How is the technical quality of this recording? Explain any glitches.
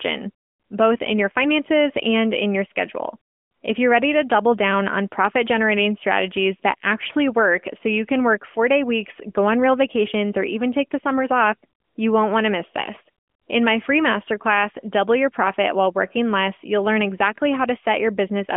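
No glitches: the speech comes over an AMR narrowband mobile link at 12.2 kbps, held to the 200 Hz to 3.4 kHz telephone band with only the light coding texture normal for that rate.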